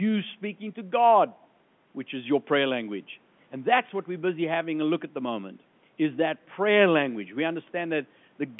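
A speech clip over an ordinary telephone connection, with nothing technically wrong with it.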